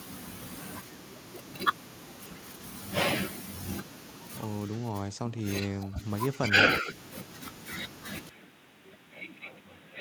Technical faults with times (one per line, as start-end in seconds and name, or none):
5.09-6.06 speech suppressed in double talk
6.33-6.93 speech suppressed in double talk
8.29-10.00 input switched to a poorer device